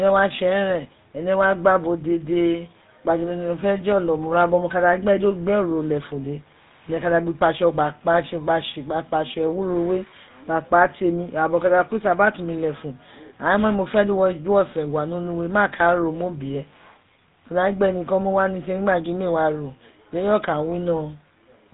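GSM full-rate codec coding runs through the whole recording and is plainly audible. The speech is rebuilt from a vocal-tract model driven by sparse, regularly spaced pulses, which fits the 13 kbps full-rate codec, so it has a buzzy, gravelly roughness and nothing above 4 kHz.

GSM bit errors strike from 4.06 to 4.09 s. Corrupted bits reached the decoder, which fits an error rate near 1 percent across a couple of frames, and garbled filter, pitch or gain values bend the sound into a brief squawk or gargling pop.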